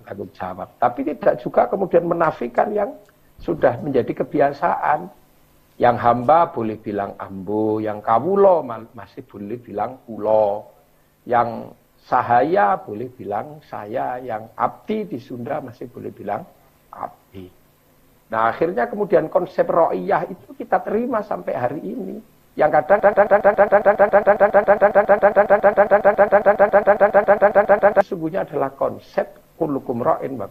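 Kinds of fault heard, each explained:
broken-record loop: from 23.0 to 28.0 s a 137 ms fragment repeats exactly, back to back, 37 times, likely because the player or stream stalled and kept resending the last piece it held, so the audio due in those five seconds is lost.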